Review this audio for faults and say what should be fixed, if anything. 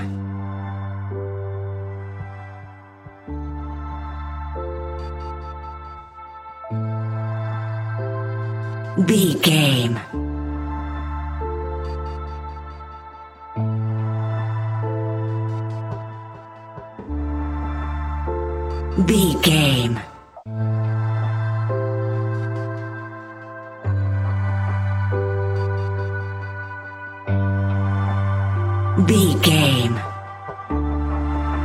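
AAC frame loss with concealment: the decoder lost frames and filled the gaps from the last good spectrum, leaving smeared, noisy patches at 5.98 s (128 ms), 16.99 s (85 ms), and 20.11 to 20.60 s, where 256 ms of losses scatter, the longest run about 150 ms. Protecting the AAC stream with error correction or retransmission would prevent these gaps.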